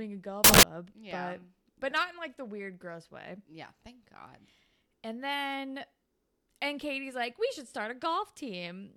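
A speech clip with one fault, samples built from the wrong bytes, between 0.44 and 0.63 s. The reader assembles each sample wrongly, so fast-changing low bits become the large part of the value. It sounds like a burst of loud, harsh broadband noise.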